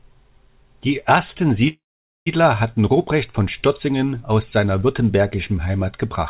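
From 1.68 to 2.28 s there is a call audio freeze: a short fading buzz or hiss, then 480 ms of silence, and the audio resumes with nothing lost, likely because delayed packets emptied the jitter buffer.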